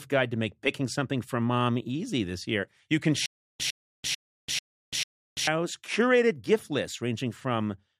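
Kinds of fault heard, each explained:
stutter with silent gaps: likely a playback stall, retrying by replaying a 103 ms fragment five times, each followed by 340 ms of silence, before "curated gift".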